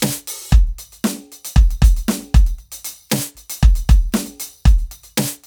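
No technical faults can be heard.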